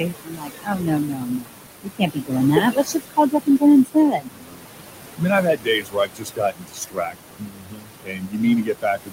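Noise suppressor artifacts run through the whole clip: the background, which sits only about 9 dB under the speech, is pulled down by about 21 dB frame by frame. Speech cut by the noise suppressor follows from 0.0 to 2.38 s, where roughly two seconds of speech are dragged down as much as about 22 dB. It recurs from 2.61 to 3.63 s (about half a second affected, up to about 21 dB), from 3.85 to 4.89 s (about 0.7 s, up to about 22 dB), and from 5.16 s to the end (up to about 22 dB). Unlike the general background suppression, these spans swallow soft consonants and endings, so the speech itself sounds faint and gapped.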